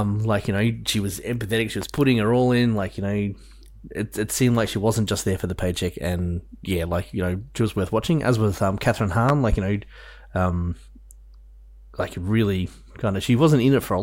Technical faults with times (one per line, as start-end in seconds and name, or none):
1.82-2.01 loud pop
9.29-9.56 loud pop